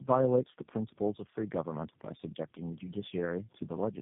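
Throughout the speech, tandem speech coding is audible. The sound fits roughly four low-rate speech codecs in series, ending in something like G.729A, each re-encoding the last one's errors. Nothing remains above 3.8 kHz, leaving it rough, muffled and warbly.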